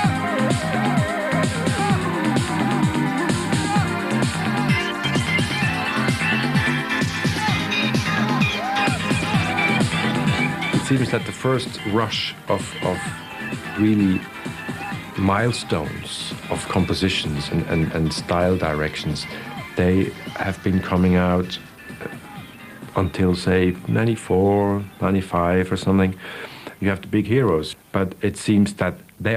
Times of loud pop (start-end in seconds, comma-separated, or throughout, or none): none